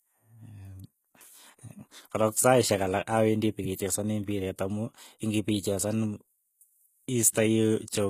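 Throughout the speech, the damage points to HE-AAC compression, likely at a low bitrate near 20 kbps. Only the lower spectrum is coded, and the treble is rebuilt from copied bands whose harmonics don't align. S sounds turn gritty and lispy, and nothing reaches above 14.9 kHz.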